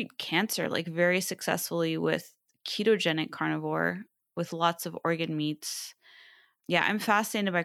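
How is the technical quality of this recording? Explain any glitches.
The technical quality of this recording is good, and there are no glitches to explain.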